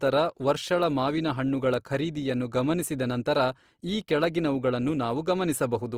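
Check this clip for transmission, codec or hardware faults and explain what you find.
One codec fault runs through the whole speech clip. The damage sounds like Opus compression, most likely in its music-oriented CELT mode at a low rate, around 24 kbps. The bandwidth stays full, reaching about 20.3 kHz, but the encoder runs short of bits and fills many bands by folding lower content or inserting noise. Tonal detail therefore comes out plainly rough, grainy and noisy, without the swirling holes typical of MP3.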